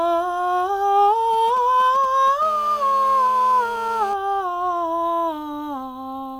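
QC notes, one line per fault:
1.33–2.44 s, GSM signalling bursts: a nearby 2G phone handshaking with its network sends short clumps of radio bursts, and something in the audio chain rectifies them. You get a galloping dit-dit-dit of brief 217 Hz buzzes, sitting roughly 20 dB under the music.
2.45–4.14 s, GSM phone buzz: right after, the phone settles into a call and transmits continuously at 217 bursts a second, so the rectified pulses become a steady, raspy 217 Hz buzz full of harmonics, about 19 dB below the music and unrelated to it.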